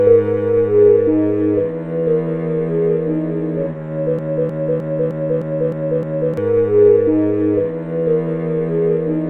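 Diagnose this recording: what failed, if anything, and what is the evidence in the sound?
The failure sits in playback or streaming: a broken-record loop from 4.19 s to 6.37 s. A 0.31 s fragment of the sound plays seven times, back to back and identical each pass, so you get that stuck, stuttering rhythm for a bit over two seconds. The likely cause is a stalled player or stream that kept re-sending the last chunk it had buffered. Whatever should have filled that gap is simply gone.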